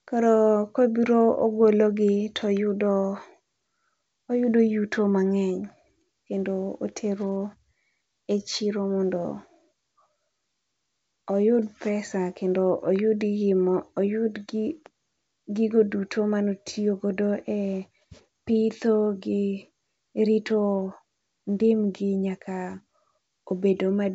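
Nothing goes wrong anywhere in this speech, which comes over G.722 wideband telephone coding with its top end stopping at about 7.7 kHz and only faint coding hiss in the upper band, consistent with the full 64 kbit/s mode.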